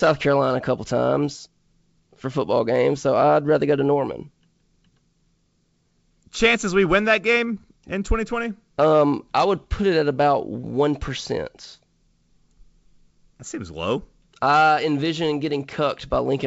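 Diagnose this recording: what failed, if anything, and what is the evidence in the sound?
Nothing failed: the speech arrives through a G.722 wideband telephone coding path at 64 kbit/s, bandwidth extending to about 7 kHz as that coder allows, with no fault evident at any stage of the chain.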